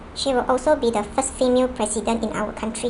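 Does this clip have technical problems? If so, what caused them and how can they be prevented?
Yes. A wrong sample rate runs throughout: speech plays 1.38 times too fast and about 5.5 semitones high, which fits 32 kHz audio played at 44.1 kHz without conversion. To prevent it, resample to the output device's rate or pass the correct rate to the player.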